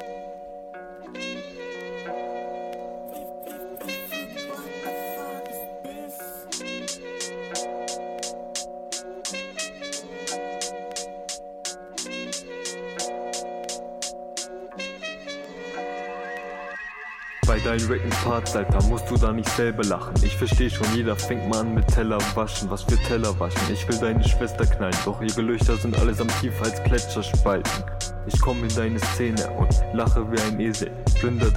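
No technical faults can be heard anywhere in this audio.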